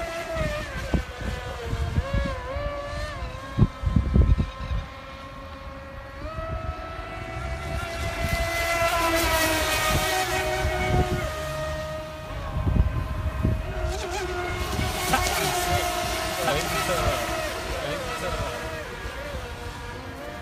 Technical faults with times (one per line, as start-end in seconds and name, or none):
14.50-20.41 doubled audio track